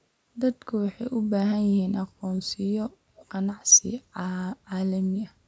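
At 3.16 s an echo leak occurs, likely because the far end's echo canceller failed to remove what its microphone caught from the loudspeaker. A faint copy of the speech, delayed by 0.35 s and far below the direct sound, briefly bleeds back until 3.26 s.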